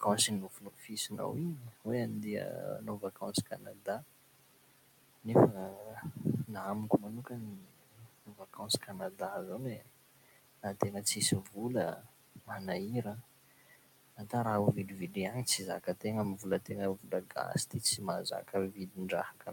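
Throughout the recording, a noise suppressor treats the steady background as noise and pulls it down by about 18 dB frame by frame. The room noise, which sits about 15 dB below the speech, therefore sinks in the pauses and swells back under the speech.

The suppressor also mistakes parts of the speech itself for noise, which is the fault of speech cut by the noise suppressor. This happens from 0.01 to 1.87 s, from 2.4 to 4.04 s, and from 5.23 to 12.51 s, with drops of about 19 dB. Within these spans roughly a second, a second and three seconds are affected. It happens again from 13.04 to 14.33 s, just before "raha ho", with drops of about 17 dB over under half a second. The last span runs from 14.88 s, just after "raha ho", to the end at 19.52 s, with drops of about 18 dB. Soft consonants and word endings sound swallowed or faint.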